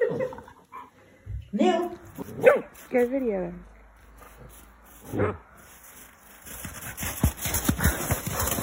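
From 3.55 s to 6.53 s the audio picks up a channel delay (doubling): one channel falls 40 ms behind the other, and once the pair is folded to mono the late copy sits beside the original at equal level, giving a thickened, doubled sound with a short slap. On a waveform every transient shows a twin 40 ms later; on a spectrogram, comb-filter notches appear as evenly spaced horizontal bands about 25 Hz apart.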